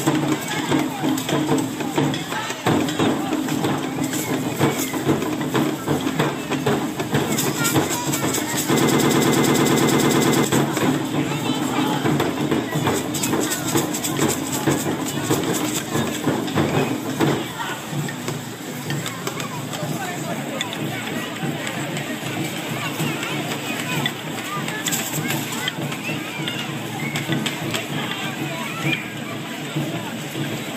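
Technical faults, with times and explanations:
8.80–10.45 s, broken-record loop: a 0.11 s snippet repeats 15 times back to back, likely a stalled stream resending its last fragment, so that stretch of audio is lost.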